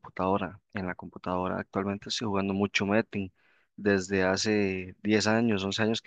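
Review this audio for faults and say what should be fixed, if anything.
Nothing stood out on listening to the speech, so there is nothing to fix.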